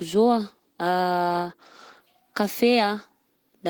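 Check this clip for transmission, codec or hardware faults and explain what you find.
No faults found.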